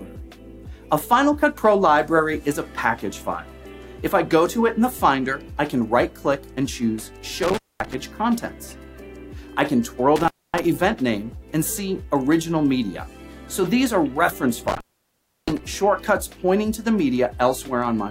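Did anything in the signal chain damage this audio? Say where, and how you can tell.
Yes. An intermittent contact in the analogue wiring, a loose cable or plug, opened the line three times: 7.43 to 7.94 s, 10.16 to 10.64 s, and 14.68 to 15.59 s. Each time the sound drops out with crackle at the edges as the contact scrapes, leaving faint hiss while the circuit is broken. The open stretches last about 226 ms, 258 ms and 671 ms.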